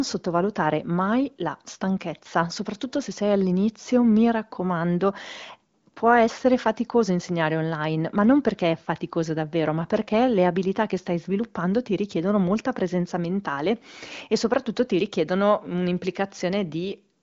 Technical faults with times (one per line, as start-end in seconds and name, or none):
none